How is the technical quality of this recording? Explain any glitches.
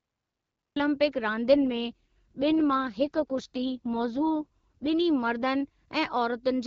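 The recording has two clear faults: it starts late, cutting into the speech, and the speech degrades for several seconds when the phone link falls back to a lower coding rate.

The cut-off start runs from 0.0 to 0.76 s. Recording or streaming began after the talker had already started, so the first 0.76 s is digital silence. At 0.76 s the speech appears abruptly, mid-sound. There is no natural onset or fade-in, just a hard jump from nothing into the voice.

The AMR rate drop runs from 1.53 to 4.88 s. A weak radio link likely made the network tell the AMR-WB codec to spend fewer bits on the speech itself and more on error protection. The roughness fits a step down from about 12.65 to 6.6 kbit/s. The bandwidth stays the same and nothing drops out. Instead the voice turns raspy and synthetic, then clears once the rate recovers. Outside that stretch the HD Voice coding leaves only light artefacts.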